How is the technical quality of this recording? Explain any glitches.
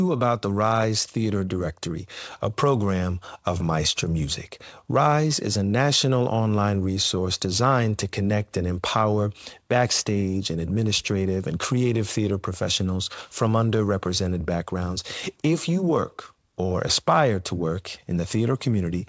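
No glitches or faults can be heard in this recording.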